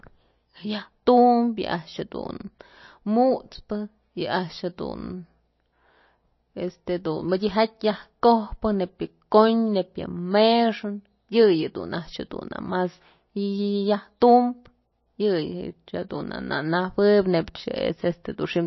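Throughout the speech the sound is watery and swirly, with smeared consonant onsets and nothing above about 5.8 kHz. The cause is likely MP3 compression at a bit budget that fits roughly 28 kbps, which cuts off the treble and makes weak frequency components flicker between frames.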